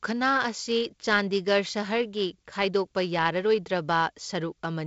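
Nothing's wrong with this speech clip; it carries the usual G.722 wideband telephone coding, with the sound stopping at about 7.7 kHz and just a faint bit of hiss up top.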